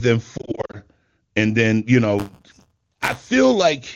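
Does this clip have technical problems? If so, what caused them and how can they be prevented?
Yes. Lost AMR speech frames at 0.38 to 0.78 s, before "and then you": short scattered dropouts, each brief, with dips or warbles, as corrupted frames were concealed. Prevent with stronger radio coverage or error protection.

Buffer tearing at 2.18 to 3.31 s, after "and then you": a steady 188 Hz buzz. That fits a 256-sample buffer, with a small slice of stale audio in each period. Prevent by keeping writer and hardware pointers properly synchronised.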